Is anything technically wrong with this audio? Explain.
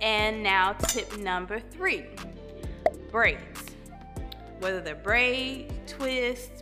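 No, no technical faults heard.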